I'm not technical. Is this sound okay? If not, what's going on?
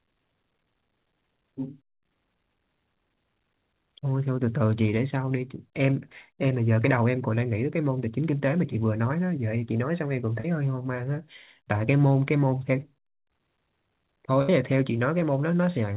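No. Short concealed packet loss at about 10.40 to 10.46 s: roughly 40 ms of the call arrived too late to play, so the receiver patched the hole by stretching the sound just before it, leaving a brief smear or wobble in the speech.

Burst of packet loss at about 14.42 to 14.50 s: a longer run, about 60 ms, was lost. The receiver kept the previous sound going while fading it down, heard as a short held buzz or hiss, then the speech picks up with that bit gone.

The narrow, telephone-like tone throughout comes from the phone-style call path, which carries nothing above 4 kHz.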